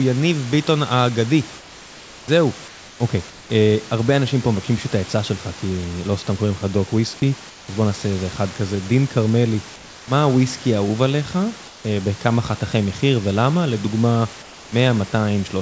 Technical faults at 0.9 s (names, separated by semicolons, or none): none